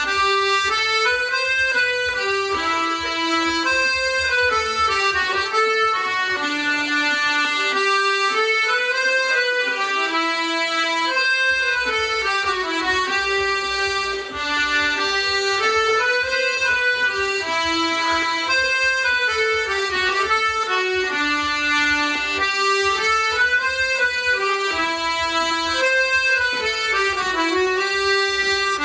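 Nothing stands out here as a technical fault; the sound just runs along steadily with no glitches worth pointing to.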